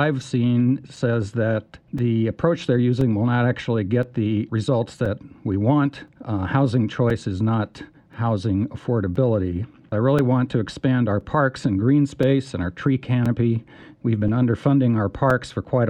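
The audio carries periodic USB or driver dropouts: from 0.96 s to 15.31 s, roughly fifteen brief gaps of a few milliseconds each replace the signal with silence, producing ticks exactly 1.024 s apart. A background task stalling the bus or audio driver on a fixed schedule causes this. The metronomic spacing sets it apart from random network packet loss, and the ticks come from gaps in the signal rather than from added clicks.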